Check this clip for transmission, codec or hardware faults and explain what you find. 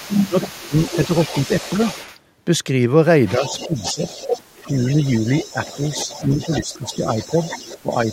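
Two faults are audible, both tied to echo control on a hands-free call.

Echo leak runs from 0.0 to 2.18 s and again from 3.27 s to the end. A second copy of the speech trails the original by 300 ms at about 15 dB below it, heard as a faint repeat. The likely cause is a far-end loudspeaker whose echo canceller failed to remove what its microphone picked up and sent it back.

Speech suppressed in double talk occurs at 0.17–0.73 s, 3.38–4.07 s, 4.56–7.36 s and 7.82–8.09 s, all during overlapping speech. The talker's level dips in pieces, deepest at about 25 dB in the first event, about 15 dB in the second and fourth, and about 10 dB in the long third stretch. The canceller likely cannot tell local speech from echo while both sides talk, so it attenuates both.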